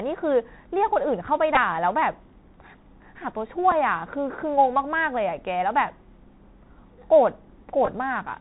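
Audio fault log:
Throughout: Bluetooth CVSD headset codec. Nothing passes above 4 kHz, s sounds turn scratchy, and granular hiss sits under the speech. Damage is plainly audible.
1.55 s: Bluetooth headset packet repeated. About 15 ms of lost audio was filled by replaying earlier packet bits. A brief buzzy tick results.
3.71 s: Bluetooth headset packet repeated. A shorter gap of 7.5 ms was patched the same way, giving a small tick.
7.85 to 7.89 s: Bluetooth headset packet repeated. About 19 ms was lost, scattered over 37.5 ms in short runs. Repeated packets give a brief rough buzz.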